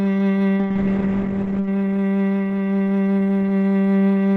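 From 0.57 s to 1.76 s the music goes through a call bitrate drop. The bandwidth estimate fell, so the encoder coded far more coarsely for about 1.1 s, consistent with a fall from around 64 kbps to 14 kbps. The top end closes from 20 kHz to 8 kHz and the texture turns rough and watery. Unlike packet loss, there are no gaps or repeated fragments. The music stays continuous, just degraded, until quality returns.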